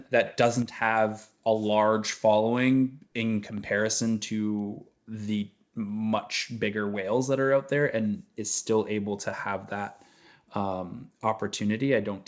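From 0.25 to 0.36 s, a faint delayed copy of the speech appears. It trails the direct voice by 370 ms and sits roughly 20 dB below it. This is an echo leak. A far-end loudspeaker's echo canceller likely let part of its microphone pickup through.

From 0.62 to 0.82 s, and again from 3.47 to 3.58 s, the level falls abruptly by about 6 dB, then recovers. This is one channel dropping out. One stereo channel was likely lost, halving the shared signal in the mono sum.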